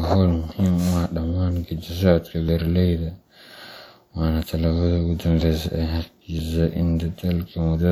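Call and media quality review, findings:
Audio missing between chunks: four short skips in the speech at 2.49, 5.42, 6.39 and 7.37 s, each dropping about 20 ms with the two sides butted together and no gap. Spacing of roughly 1 s suggests chunk-boundary loss, likely in a recorder or processor handling 1 s blocks and losing samples during the handover from one chunk to the next. Check the buffer rollover path.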